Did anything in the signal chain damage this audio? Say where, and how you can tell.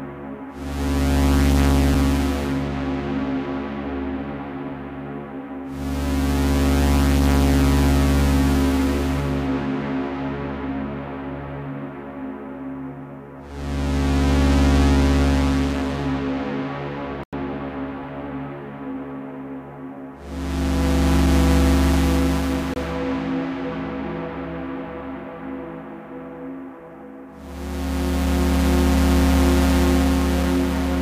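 Yes. Hard-edged holes at 17.24–17.33 s and 22.74–22.76 s are blocks of digital silence from the driver or buffer stage, which fits unfilled 4096- and 1024-sample buffers.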